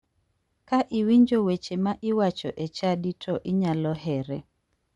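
Speech carrying Bluetooth LC3 compression throughout, with plainly audible damage: the upper band turns breathy and grainy where noise fills zeroed spectrum, rather than simply dulling as a low-pass would. The damage fits 7.5 ms frames at around 48 kbps, likely from an LE Audio link.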